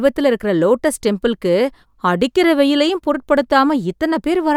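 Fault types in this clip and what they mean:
Nothing to flag here: the speech comes across steady and untroubled, with no technical faults to be heard anywhere in it.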